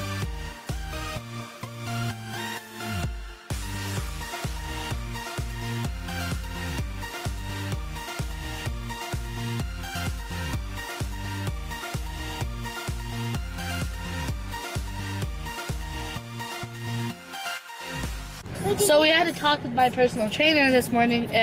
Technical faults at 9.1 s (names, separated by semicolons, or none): none